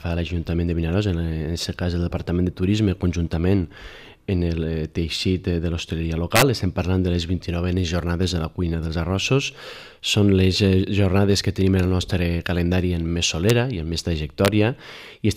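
Integer overflow cracks the audio at 6.36–6.42 s, 13.50 s and 14.45–14.48 s. Peaks wrap to opposite full scale, showing as sign-flipped spikes and broadband vertical streaks.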